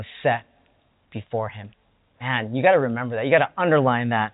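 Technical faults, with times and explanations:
No technical faults can be heard in this speech clip. The G.711 telephone coding is audible as the usual narrow band, with nothing above 4 kHz, and at most a faint quantisation hiss that rises and falls with the speech level.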